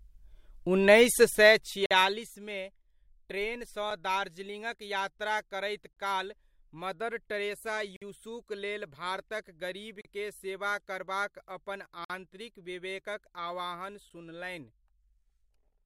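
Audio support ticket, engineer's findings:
Gap between stream segments: hard-edged silent holes at 1.86–1.91 s, 7.96–8.02 s, 10.01–10.05 s, 12.05–12.10 s and 14.1 s, lasting about 12 to 53 ms. The spacing matches 2 s segment boundaries, pointing to the segmenter or packager timestamps. The player pads the gaps with silence. Unlike a dropout, no sound is missing: material resumes exactly where it stopped, and the clip runs longer.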